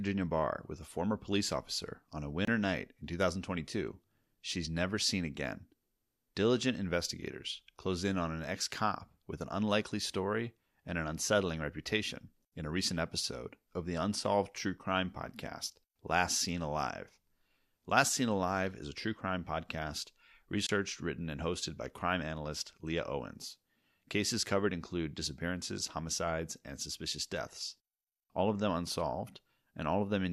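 At 2.45 to 2.48 s, between "police officer on a" and "night in", the speech drops out in a digital broadcast dropout: the receiver mutes briefly when a frame fails to decode, leaving a hole of about 24 ms, which fits a single lost frame. The same fault recurs at 20.67 to 20.70 s, after "a true crime podcast" and before "written and hosted by". Each is a short, abrupt silence, and the audio sent during the gap is gone.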